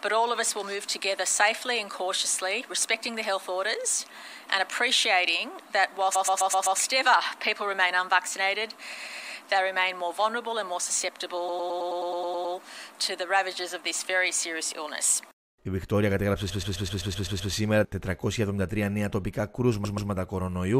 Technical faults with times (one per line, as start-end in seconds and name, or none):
6.14-6.78 repeated frames
8.94-9.32 repeated frames
11.48-12.54 repeated frames
16.49-17.51 repeated frames
19.84-20.09 repeated frames